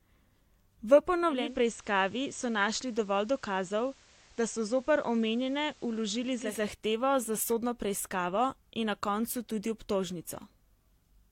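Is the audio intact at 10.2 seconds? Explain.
Yes, the speech at 10.2 seconds is intact, with no dropout, click, distortion or other fault to be heard at that moment.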